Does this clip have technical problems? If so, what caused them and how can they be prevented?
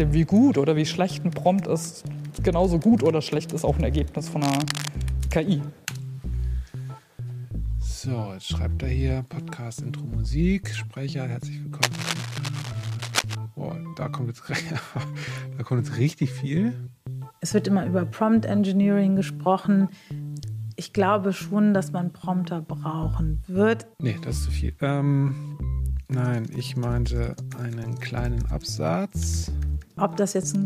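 Yes. Cable scratch noise occurs at 4.42–4.89 s and 11.82–13.35 s, about 5 dB below the sound, likely from a worn cable or connector shifting and varying its contact resistance. A spectrogram shows ragged broadband smears, and the waveform shows dense, irregular spikes. Replacing worn leads and securing connectors prevents it.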